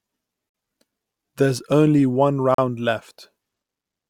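Speech, with two hard-edged silent holes: a gap between stream segments at 0.49 to 0.54 s, and another at 2.54 to 2.58 s, right after "only one". Segment time stamps 2 s apart don't quite meet, so the player pads with silence.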